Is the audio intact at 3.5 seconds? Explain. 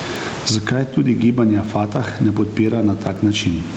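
No. At 3.5 seconds the audio carries two faults. The first is word clock ticks, which run from 0.16 s to 3.67 s at a steady rate of about one every half second, around seven in all. They point to a digital link read by a device on its own unlocked clock. A small mismatch of a few tens of parts per million makes one sample slip each time the clocks drift past each other, and each slip gives a brief, sharp tick. The steady, clockwork spacing sets them apart from packet-loss clicks or dropouts, which come irregularly and take out longer stretches.

The second fault is gain pumping, present through the whole clip. The level swings by about 20 dB, so the speech sounds squashed. The likely cause is an input gain set far too high, with a fast limiter clamping down on every peak. Unlike a noise gate, which cuts the background off in the gaps, this fault pulls the level down on every loud sound.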